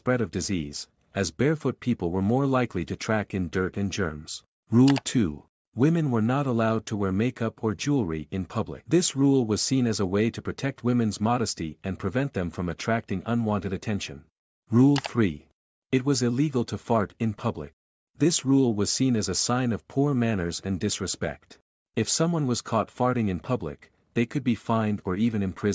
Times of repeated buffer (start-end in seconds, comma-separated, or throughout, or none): none